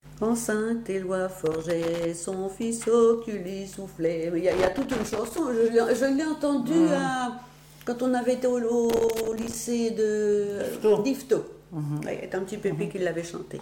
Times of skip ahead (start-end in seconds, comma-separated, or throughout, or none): none